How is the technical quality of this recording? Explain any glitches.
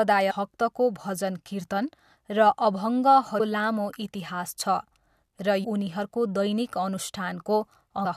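The speech is marred by four short glitches, all from damaged data in a compressed stream: one from 0.30 to 0.32 s, then single blips at 3.39, 5.63 and 8.04 s. At each point, corrupted bytes make the decoder misread a frame and lose sync until it finds the next valid header, producing a brief glitch about 20 ms long.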